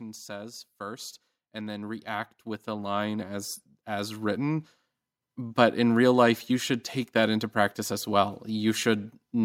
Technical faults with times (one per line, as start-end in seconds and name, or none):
0.26-4.66 automatic gain rising